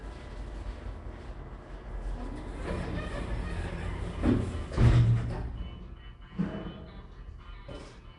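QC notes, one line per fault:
Throughout: likely Nellymoser compression. A rough, hissy, underwater smear from noise-filled empty bands, nothing above 10.6 kHz, fitting a 44 kbps stream.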